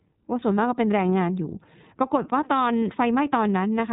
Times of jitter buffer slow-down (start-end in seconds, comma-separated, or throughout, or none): none